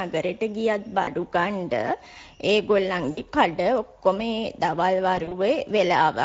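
The whole clip has passed through the Speex codec at a rate that fits a mode around 16.8 kbps. With so few bits left to model the excitation, the CELP decoder rebuilds speech only approximately. The damage is plainly audible throughout: the voice has a rough, hoarse, noisy grain layered over every syllable.

Speex also has to cover for VoIP packet loss with its own concealment, three times. When packets go missing, the decoder keeps running on its last pitch and filter settings while fading the gain down.

From 1.03 to 1.10 s, about 40 ms of audio is lost, which fits two dropped 20 ms frames. The sound smears into a buzzy tone or coloured noise that fades out.

From 3.11 to 3.20 s, about 60 ms is lost. Because each concealed frame builds on the one before, the voice entering on "කඩ ඔක්කොම දවල්" still sounds weak or distorted for a moment afterwards.

From 5.15 to 5.35 s, just after "කඩ ඔක්කොම දවල්", about 80 ms of losses are scattered across 160 ms, with no gap longer than 40 ms. 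The result is a run of short concealed patches.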